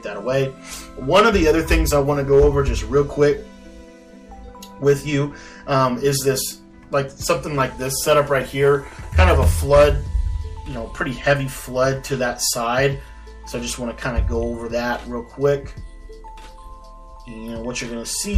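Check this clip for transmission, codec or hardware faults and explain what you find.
One fault is present: hard clipping, throughout the clip. A stage in the chain was overdriven by about 9 dB, so the peaks that exceed its limit, around half a percent of samples, are cut flat. Those squared-off tops add high harmonics, heard as crackle on the loudest moments.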